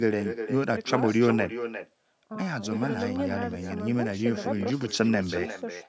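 From the first syllable to the end, the speech has a trailing shadow, which is the classic echo with no canceller. The far end is playing the call out of a loudspeaker, their microphone picks it back up, and nothing strips it out, so every phrase returns after a round trip of roughly 400 ms. The copy sits about 10 dB under the direct speech and sounds thinner. The band stops at 8 kHz, just the call's microphone processing at work.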